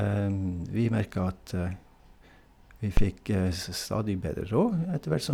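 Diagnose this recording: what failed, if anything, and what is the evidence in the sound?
A phantom power thump hits the analogue input stage at 2.97 s and lasts until 3.07 s. It is a deep, low thud. It peaks at about -11 dBFS and decays within 22 ms. Switching the supply on a live input sent a voltage step through the coupling capacitors.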